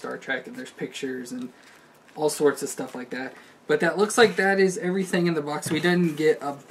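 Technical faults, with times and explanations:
3.24 s, corrupt frame decoded: a single compressed frame arrived with some of its bits flipped, and the decoder played it rather than discarding or concealing it. The damaged values set wrong gains and misplaced spectral codes, so for the length of that one frame energy lands at frequencies where the audio has none. The result is a brief, isolated glitch riding on top of the sound, fairly faint at around -35 dBFS.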